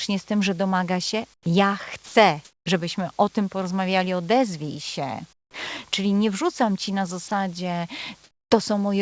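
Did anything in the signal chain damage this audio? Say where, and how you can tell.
Yes. In call processing, at 1.34–1.46, 2.45–2.66 (just before "żebyśmy o tym porozmawiali"), 5.33–5.54 (after "tym porozmawiali odezwij się") and 8.24–8.51 s, the real background turns into steady, featureless hiss, up to about 14 dB quieter. That is comfort noise in place of the background, likely from discontinuous transmission. Noise fills these gaps, which is what separates them from packet-loss dropouts, which go silent.

Sound dropped by the voice detector occurs at 2.06–2.15 s, right before "żebyśmy o tym porozmawiali", and at 7.28–7.31 s. Here the same flat noise replaces wanted sound, not background, likely because the detector misjudged that sound as background and stopped sending.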